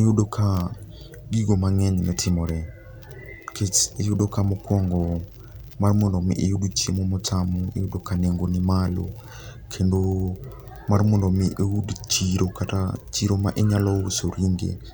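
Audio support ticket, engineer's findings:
No faults found on playback; no component implicated.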